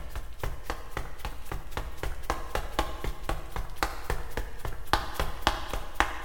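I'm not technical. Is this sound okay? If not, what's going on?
Yes, this sound is okay. Nothing in it points to a technical problem.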